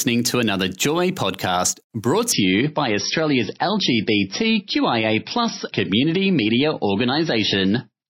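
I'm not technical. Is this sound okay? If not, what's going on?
No. Right after "podcast brought", at 2.32 s, the adaptive stream switches to a lower bitrate. The speech suddenly turns dull and fuzzy, with no gap, and stays that way.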